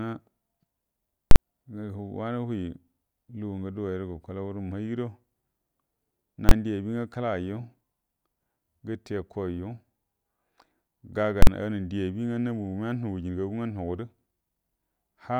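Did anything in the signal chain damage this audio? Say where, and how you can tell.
Yes. There are invalid numbers at full scale in the processing stage, at 1.31 to 1.36 s, 6.49 to 6.51 s, and 11.42 to 11.47 s. Each one is a hard, loud bang in the speech. The first and last last about 46 ms, which fits a 2048-sample block, and the middle one lasts about 23 ms, which fits a 1024-sample block. Some calculation blew up to infinite or invalid values, and those were clamped to the maximum, pinning the output at full scale for the whole block.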